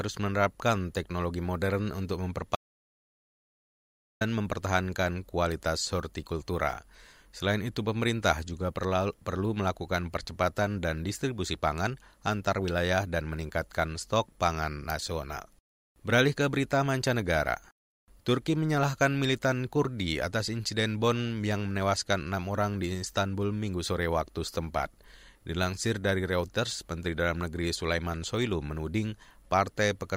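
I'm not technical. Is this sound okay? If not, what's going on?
No. There is an audio dropout to silence from 2.55 to 4.21 s. After "menerapkan teknologi modern untuk", everything goes completely silent for 1.65 seconds. Speech returns at "mempertahankan kualitas hortikultura". The input was likely cut off briefly, and that speech is lost.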